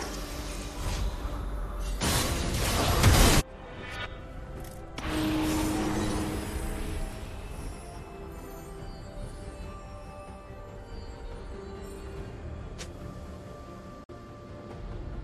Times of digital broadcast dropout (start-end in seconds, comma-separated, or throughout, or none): 14.04-14.10